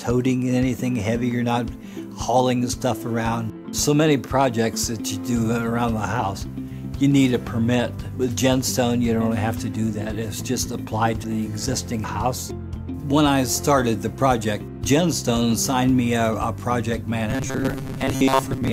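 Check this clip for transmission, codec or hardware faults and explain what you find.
One fault is present, at the very end of the clip. Robotic sound from repeated short buffers runs from 17.30 to 18.73 s, where the audio becomes a rigid, metallic buzz at 133 Hz that only loosely follows the original. The likely cause is audio arriving too seldom, with a stretch of about 7.5 ms replayed over and over while most of the real audio in that span is skipped.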